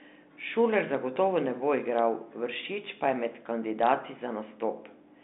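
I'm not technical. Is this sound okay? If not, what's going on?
No. Twice, the recording's baseline suddenly jumped, as if the equipment recalibrated itself or an offset input was switched in, and then quickly faded back. That fault is a DC step. You hear each jump as a brief low thump, once at about 1.16 seconds, just before "ne bo igral", and again at about 3.79 seconds, right after "pa je med". The speech keeps going unchanged through both, carried over a telephone-style line that sounds narrow but clean.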